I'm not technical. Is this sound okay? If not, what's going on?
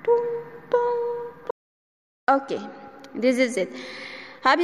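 No. From 1.51 to 2.28 seconds the sound cuts out completely. This is an audio dropout to silence. For about three quarters of a second there is nothing at all, not even background hiss. The input was likely briefly lost, so whatever happened then is missing.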